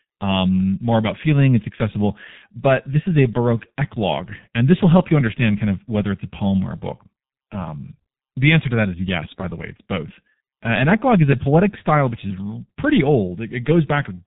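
G.723.1 codec damage runs through the whole of this speech recording and is heavy: nothing reaches above about 3.8 kHz, and the coarse 30 ms frame updates leave the voice muffled and hoarse with smeared consonants, which fits a bitrate near 6.3 kbit/s.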